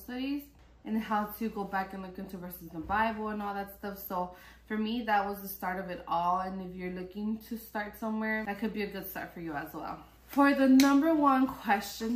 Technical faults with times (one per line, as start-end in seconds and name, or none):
none